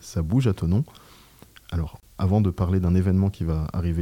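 A 28 ms silence breaks the sound at 2.00–2.03 s, a gap at a join of encoded pieces: untrimmed encoder delay and padding show as a blank vertical band with smeared edges.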